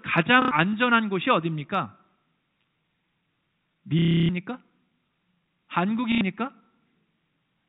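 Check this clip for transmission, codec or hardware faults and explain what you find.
One transmission fault recurs three times: packet loss with last packet repeated, heard over the telephone-band sound of the G.711 coding, which stops everything above 4 kHz.

At 0.42 to 0.51 s and 6.12 to 6.21 s there is a brief robotic stutter, and at 3.99 to 4.29 s a longer buzzing one. Packets went missing (90 ms, then 300 ms, then 90 ms), and the receiver replayed the last good packet until fresh audio arrived. The lengths fit 30 ms packets, so the repeats buzz at about 33 Hz.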